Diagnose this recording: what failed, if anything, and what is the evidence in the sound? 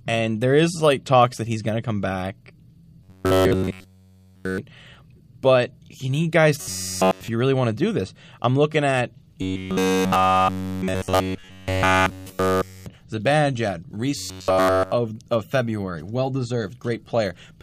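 Robotic sound from repeated short buffers appears at 3.04 to 4.58 s, 6.61 to 7.28 s, 9.42 to 12.86 s and 14.17 to 14.92 s. In each stretch the speech collapses into a rigid metallic buzz at 93.8 Hz that only loosely tracks the syllables. The likely cause is a driver or buffer underrun: fresh audio stopped arriving, and essentially all of each stretch was filled by looping the last fragment, which fits a buffer of about 10.7 ms.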